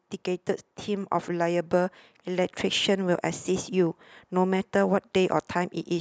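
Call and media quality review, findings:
Automatic gain rising, 0.85 to 2.91 s. Speech and background noise floor swell together by about 4 dB over roughly 2 s. Probable component: AGC stage raising gain on quiet input. Waveform: envelope widens steadily, noise between syllables grows too. Spectrogram: whole band brightens uniformly, with no spectral shift.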